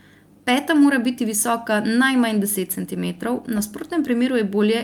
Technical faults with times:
none

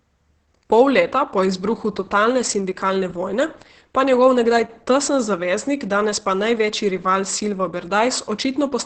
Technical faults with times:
0.00-8.85 Opus voice compression

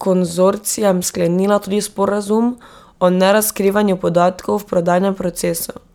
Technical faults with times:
1.22-1.24 damaged data in a compressed stream
5.61 damaged data in a compressed stream

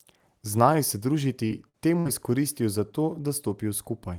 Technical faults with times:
1.46-2.09 repeated packet loss (robotic sound)

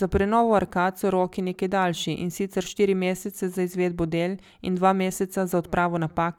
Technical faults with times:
none

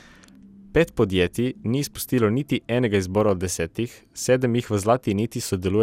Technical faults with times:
0.00-5.82 generation loss

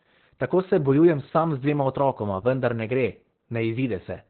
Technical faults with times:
0.00-4.30 Opus voice compression

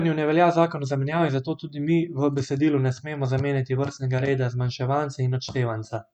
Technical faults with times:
none

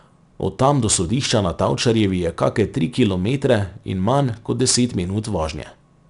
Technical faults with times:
0.00-6.10 4-bit ADPCM compression

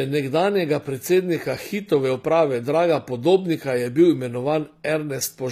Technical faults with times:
0.00-5.52 HE-AAC compression

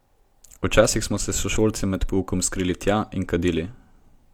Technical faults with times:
none

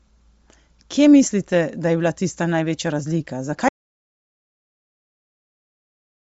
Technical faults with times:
0.00-6.20 Bluetooth LC3 compression
3.69-6.20 audio dropout to silence

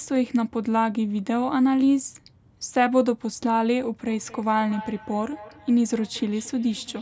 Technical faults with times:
4.07-7.01 feedback echo between two devices

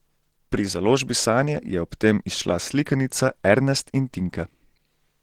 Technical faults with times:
0.00-5.23 Opus compression

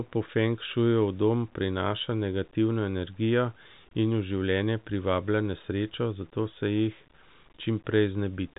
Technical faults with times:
0.00-8.58 low bit depth without dither

